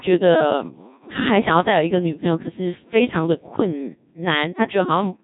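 A robotic, buzzy quality runs through the whole of this speech recording, with nothing above 3.8 kHz and heavy damage to the character of the voice. That is the sound of the Codec 2 vocoder, consistent with a low-rate mode around 1.6 kbit/s. Only pitch, voicing, energy and a coarse spectral envelope survive coding, and the decoder rebuilds the voice from summed sine waves. Because the original waveform is discarded, the speech comes out synthetic and metallic.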